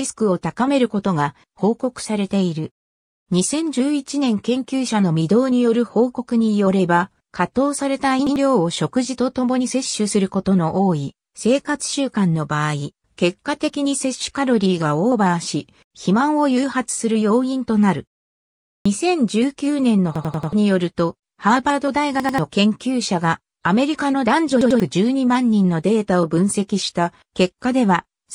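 Repeated buffer stutters occur at 8.27, 18.76, 20.16, 22.20 and 24.61 s. Fresh audio arrived late, so a 93 ms piece, which fits a 4096-sample buffer, replays with hard joins: once at the first two, four times at 20.16 s, and twice at the last two.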